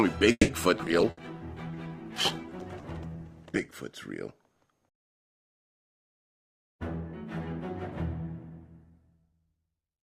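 From 0.31 to 0.51 s the sound is carried on as a fading buzz or hiss for 170 ms, then 30 ms of silence, and resumes exactly where it stopped. This is a call audio freeze, likely from packets held up until the jitter buffer ran dry. Unlike packet loss, nothing is missing; the wait adds 170 ms of delay.

Two skip ahead events follow, at 0.78 to 0.82 s and 0.85 to 0.89 s. Each drops around 70 ms while later audio was already waiting, so the receiver could cut roughly 50 ms of delay. Only about 10 ms of fill joins the two sides, so playback lurches forward with almost no gap rather than pausing.

At 0.81 s a call bitrate drop begins. The encoder falls from 48 to 12 kbps and stays at its lowest for 2.88 s, so the sound turns coarse and loses top end until it clears at 3.85 s. This is a change in quality, with no gap and no jump.

From 1.10 to 1.20 s a burst of packet loss is bridged by 70 ms of fading held sound, and 60 ms of audio never returns. 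That missing audio sets it apart from the freeze, and the fading fill sets it apart from the near-seamless skips.

From 1.22 to 3.18 s a jitter buffer slow-down repeats pitch periods to build a reserve, adding 98 ms. The audio plays at 96% speed with unchanged pitch and drawn-out sounds, so this is stretching, not a pitch drop.

From 6.46 to 9.34 s a jitter buffer speed-up trims short pitch-period pieces to shed excess delay, removing roughly 200 ms. At 106% speed with pitch unchanged, the stretch sounds hurried, which separates it from both the skips and the earlier slow-down.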